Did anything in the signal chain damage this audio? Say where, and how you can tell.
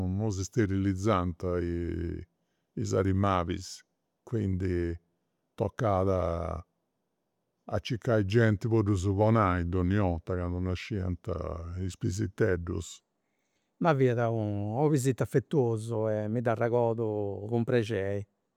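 Yes. Section at the wrong speed, 0.0 to 13.0 s: the speech runs at 0.84x with pitch about three semitones low, likely playback against a mismatched clock.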